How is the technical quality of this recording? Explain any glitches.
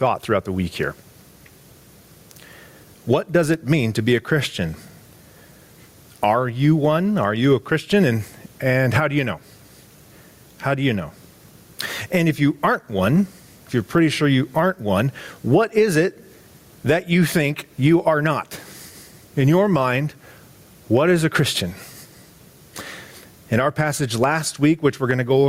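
The recording suffers from gain pumping across its whole length. The gain drops sharply whenever a loud sound arrives, a swing of roughly 15 dB. Loud and quiet passages sit unnaturally close in level, so the whole thing sounds squashed. The likely cause is input gain set far too high, with a fast limiter or compressor clamping down on each peak and releasing in the gaps.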